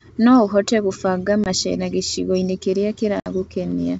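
At 1.44 s the speech drops into a hard-edged 20 ms hole, about one packet's worth, and at 3.20 s a longer 60 ms gap follows, roughly three packets. Both are packet loss on an ADPCM call. The missing audio is filled with silence, so the receiving decoder's adaptive predictor and step size drift from the sender's. Speech resumes with brief distortion, settling by 1.48 s and 3.31 s respectively, against the clear G.722 wideband background.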